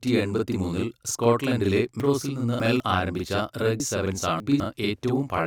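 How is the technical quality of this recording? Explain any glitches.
The recording has two clear technical faults: a constant doubling across the whole clip and two short passages where the speech plays in the wrong order.

Channel delay (doubling) runs throughout. One channel lags the other by about 42.7 ms, which fits a 2048-sample buffer, and both are summed to mono. The late copy arrives at equal strength as a distinct slap behind every syllable. Unlike reverb, it is a single discrete repeat with no decaying tail.

Chunks out of order occur from 2.0 to 2.8 s, right after "മൂന്നിൽ സ്കോട്ട്ലൻഡിലെ", and again from 3.8 to 4.6 s. In each, one 200 ms piece plays three pieces late, producing a jumbled stretch with three hard joins. Unlike a dropout or a stutter, nothing is missing and nothing repeats.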